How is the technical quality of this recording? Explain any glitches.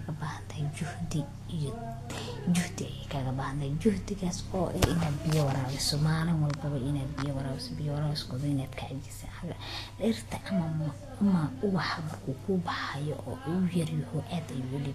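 The recording has one clear technical problem, present from start to finish rather than as isolated glitches.

Vorbis compression affects the whole clip. The sound likely passed through a Vorbis encoder at low quality, consistent with a bitrate around 35 kbps. Nothing is present above about 14.2 kHz, and the remaining treble is quantised so coarsely that fine detail turns into noise of similar energy. The speech therefore sounds hissy and grainy, with roughened tones and softened, blurred consonant attacks.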